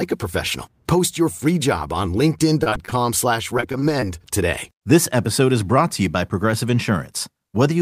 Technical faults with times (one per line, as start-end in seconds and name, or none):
2.63-2.94 repeated packet loss (robotic sound)
3.58-4.03 repeated packet loss (robotic sound)